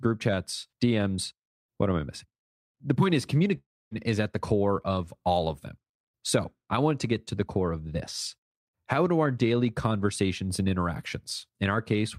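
A long network dropout in this speech clip runs from 3.57 to 3.93 s, right after "point is". Audio stops arriving, likely from lost packets. The last sound stretches into a fading buzz, leaving 260 ms of silence, and about 340 ms never returns before "is at the core".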